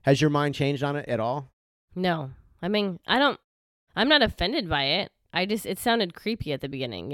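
No technical faults are audible.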